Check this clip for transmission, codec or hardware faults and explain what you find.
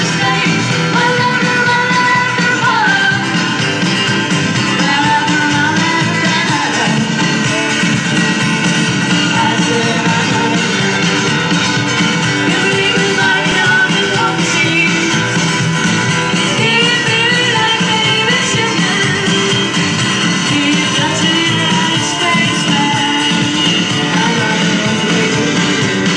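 No transmission, codec or hardware faults turn up anywhere in this clip.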